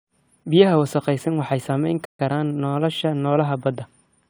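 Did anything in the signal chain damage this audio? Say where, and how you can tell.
Yes. Throughout, the speech sounds swirly, smeared and hollow, with softened consonant attacks, more than a single moderate-rate encode would cause. This is generation loss at the codec stage, likely from repeated AAC-style re-encoding around 96 kbit/s, about three passes, each adding fresh quantisation damage.

At playback, the sound drops to silence from 2.05 to 2.19 s, about 140 ms, between "wasakhaysan waxay saameyn" and "karaan nolosha", then resumes where it left off. This is a playback stall, likely the player starving for data or its thread blocking until output recovered.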